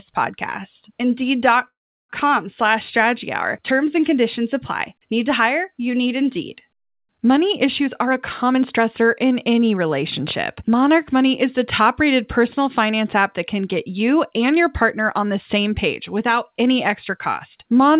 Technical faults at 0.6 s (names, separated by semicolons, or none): none